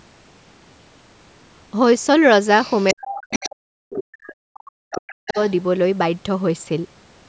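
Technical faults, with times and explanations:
2.6–3.06 s, 3.3–3.5 s, 3.94–4.03 s, 4.54–4.6 s and 5.07–5.53 s, other side's voice leaking through: a second voice comes through in short scraps, roughly 10 to 30 dB under the main talker. It's likely the far end's loudspeaker playback getting back into the mic, with the echo canceller not fully scrubbing it out.
2.93–5.36 s, speech suppressed in double talk: the main talker keeps getting pushed down, by as much as about 40 dB at the worst points and for around two seconds in total, while the leaked voice overlaps. The likely cause is the echo canceller failing to tell the two voices apart and turning both down together.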